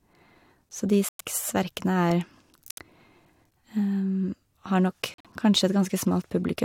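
Corrupt frame muted at 1.09, 2.70 and 5.14 s: damaged compressed frames were rejected by the decoder and replaced with silence, leaving abrupt gaps of about 0.12, 0.09 and 0.12 s in the speech, each spanning several frames.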